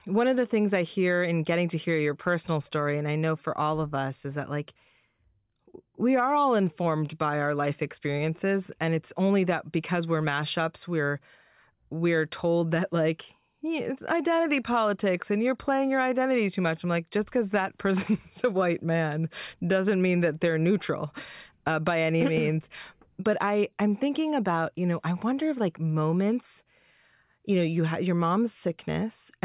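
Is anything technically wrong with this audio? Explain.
No, nothing technically wrong can be heard in this speech recording, and the signal stays steady and intact throughout.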